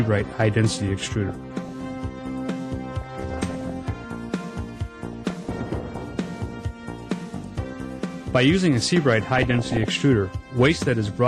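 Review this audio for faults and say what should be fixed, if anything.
DAB burbling at 1.29–1.73 s, 3.01–3.70 s, 5.05–6.05 s and 9.35–9.84 s: weak reception lets bit errors corrupt MP2 sub-band samples and scale factors, producing short noise blips in single sub-bands and sudden sub-band level jumps. A better-sited or higher-gain antenna would improve reception and prevent it.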